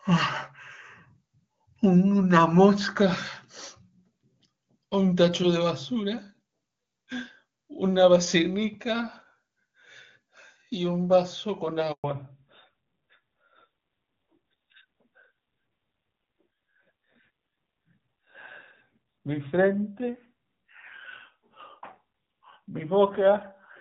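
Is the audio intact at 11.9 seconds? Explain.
No. A handover gap runs from 11.92 to 12.04 s: as the call switched networks, no speech frames arrived for 120 ms. The audio fades out within a few tens of milliseconds and stays silent until the new link resumes, so that stretch of speech is lost.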